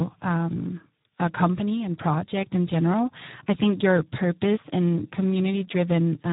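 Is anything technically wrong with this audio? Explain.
Yes. Throughout the speech the audio has passed through the Speex codec at a low quality setting, which fits a budget of around 8 kbps. With so few bits for the excitation signal, the codec can only roughly approximate each stretch of speech, so the damage is heavy. The result sounds noisy and hoarse, with a rough texture, and the band is cut off, with nothing above about 3.8 kHz, giving a muffled telephone-like quality.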